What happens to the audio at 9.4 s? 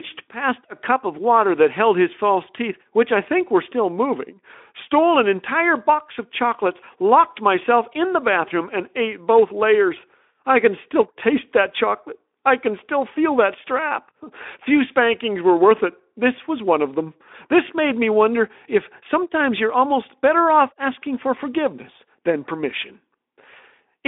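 Nothing goes wrong at 9.4 s: the speech carries on intact through that moment.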